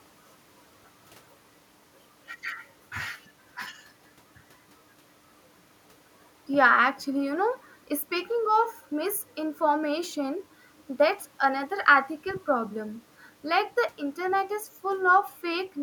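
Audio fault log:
Nothing stood out on listening to the speech recording.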